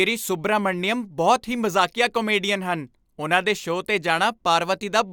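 A short speech recording with no audible technical faults anywhere in the signal.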